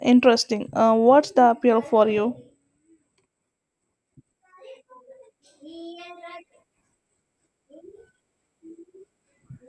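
No technical faults can be heard anywhere in this speech recording.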